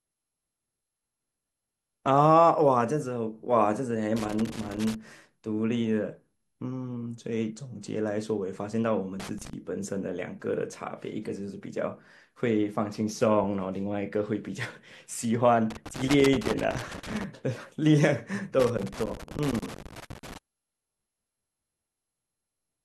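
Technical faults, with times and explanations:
4.16–4.95 s, 9.20–9.53 s, 15.70–17.24 s and 18.60–20.38 s: loose connector crackle. Those irregular scratchy bursts are a worn or dirty contact flickering open and shut, chopping the speech into ragged fragments. The last two stretches run well over a second each.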